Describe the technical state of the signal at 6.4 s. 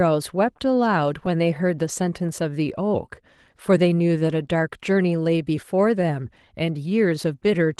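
The sender's clock is running slow against the receiver's, by roughly 2 percent. This clock drift between sender and receiver lasts the whole clip. Because packets arrive a little behind the playback schedule, the jitter buffer keeps draining. At 6.4 s the sound is still being delivered late and stretched, with playback at about 98 percent of natural pace, so its rhythm drags slightly behind where it should sit.

To keep in step, the receiver makes repeated timing corrections, and 6.4 s falls inside that run, which spans 0.28 to 7.16 s. The buffer repeatedly inserts short stretches of duplicated or padded audio, all in the same direction and unevenly spaced. Together they add something like 150 ms over the span. Around 6.4 s, if heard at all, this comes through as small hiccups and a faintly uneven tempo. All of this sits on top of the Opus call coding, whose band tops out near 12 kHz.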